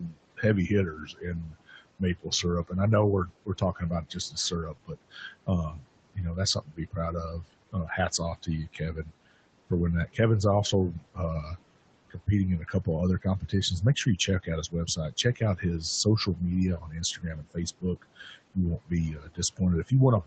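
Throughout, the room noise, sitting about 18 dB below the speech, sinks away between phrases and swells back under them. These are noise suppressor artifacts: frame by frame, the suppressor pulls down the bands it judges to be steady noise, by about 21 dB.

From 0.0 to 2.72 s, just before "I know we're", roughly a second of soft sounds and endings comes out swallowed. The same happens from 3.27 to 10.18 s, after "I know we're", over about two seconds in total, and again from 12.1 s to the end. This is speech cut by the noise suppressor: it mistook quiet speech for background and turned it down by up to about 22 dB.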